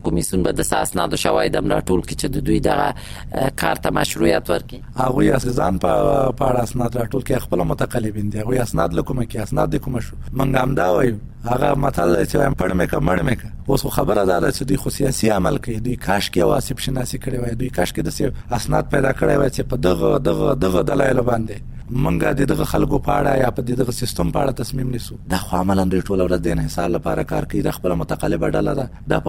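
Throughout the clip, overlap-add ripple from misaligned frame windows pumps the level by about 60 dB around 100 times a second, a metallic buzz with extra tones around each note, showing as evenly spaced vertical stripes.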